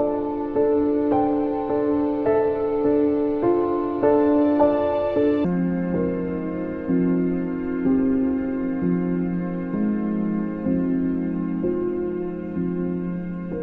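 From 5.45 s to the end at 13.62 s, a section at the wrong speed plays at 0.604 times its proper rate, likely from being fitted to the wrong clock. Pitch falls about ten semitones while timing stretches, and both shift together, which distinguishes it from a pitch shift alone.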